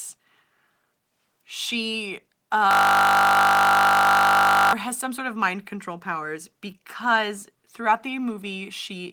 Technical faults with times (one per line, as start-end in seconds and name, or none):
2.71-4.73 system hang loop